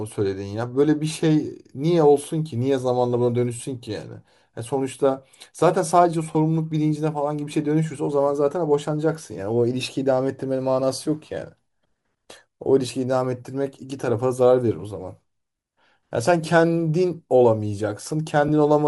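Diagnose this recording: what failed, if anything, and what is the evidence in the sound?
Codec stage: the speech has a breathy, grainy top end throughout, likely from Bluetooth LC3 compression zeroing upper bands and filling them with noise, which fits around 48 kbps.

Wireless link: lost LE Audio frames cause brief noisy smears at 6.33 s and 18.48 s, where the decoder repeated the last spectrum with scrambled signs. Their lengths fit two and one 10 ms frames.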